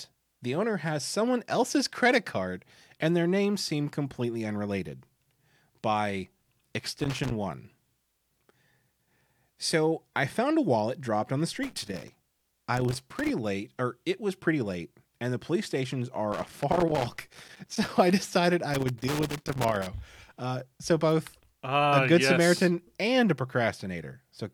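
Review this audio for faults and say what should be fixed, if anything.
A loose connector somewhere in the signal chain is making and breaking contact, producing loose connector crackle: the speech is chopped into irregular bursts of scratching at 6.80–7.31 s, 11.63–13.30 s, 16.32–17.92 s and 18.74–19.87 s. Reseat, clean or replace the suspect plugs and cables, and strain-relieve them so they cannot shift during recording.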